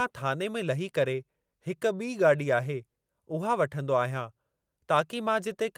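No technical faults are audible.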